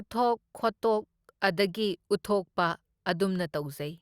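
No dropouts, distortion, level jumps or other transmission faults can be heard anywhere in the recording.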